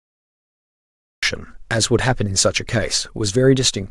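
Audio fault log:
0.00–1.23 s, cut-off start: the speech is preceded by digital silence and then enters abruptly at 1.23 s, already mid-sound with no natural attack or fade-in, because capture began late and the opening of the utterance was never recorded.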